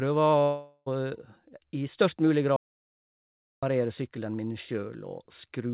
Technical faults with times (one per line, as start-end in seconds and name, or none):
0.42-0.88 long network dropout
2.56-3.63 audio dropout to silence